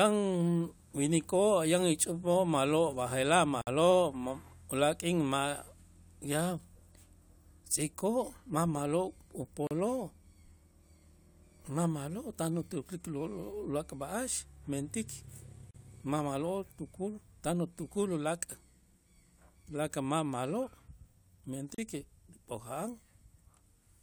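Short dropouts cut into the continuous speech at 3.61 s (about 57 ms, just before "ma ulaak' k'in"), then at 9.67, 15.71 and 21.75 s (about 37 ms each), one every 6.0 s, each with smeared edges before the sound resumes where it stopped. This is a gap at a join of encoded pieces: separately encoded segments were spliced untrimmed, so each encoder's start-up silence and padded final frame remain.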